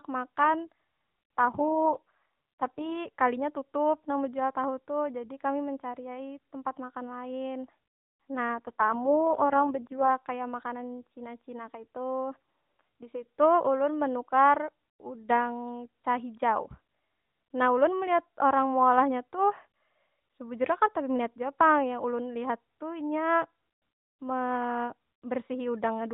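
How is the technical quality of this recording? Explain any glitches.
The speech passes through an AMR narrowband mobile codec, with nothing above 4 kHz, and its quality dips twice. An AMR rate drop occurs from 1.40 to 2.97 s and again from 8.55 to 10.09 s. Each time, a weak link forces fewer bits for the voice. There is no gap and no change in band. The voice turns buzzy and synthetic, which fits a fall from 12.2 to 4.75 kbps. Then it recovers.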